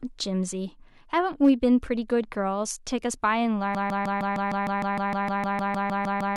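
Speech runs cleanly until a brief burst of hard clipping between 1.45 and 1.50 s, where a peak pushes about 1 dB past what the signal path can carry and the top is shaved flat. It is heard as crackle at that moment. On a waveform the crests sit pressed against a ceiling for those 50-odd milliseconds, and a spectrogram shows a thin vertical smear of added high harmonics reaching well above the speech band. From 3.75 s to the end, a broken-record loop takes over. A 153.6 ms fragment plays back to back about 17 times, giving a stuttering repetition in place of whatever should have followed. The likely cause is a player, encoder or stream that stalled and kept resending the last piece it held. The waveform shows an identical block tiled end to end, and the spectrogram shows the same pattern stamped repeatedly at regular spacing.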